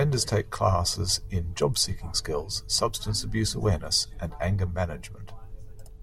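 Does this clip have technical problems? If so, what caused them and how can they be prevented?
No, nothing in this speech recording points to a technical fault, so there is no cause to trace and nothing to prevent.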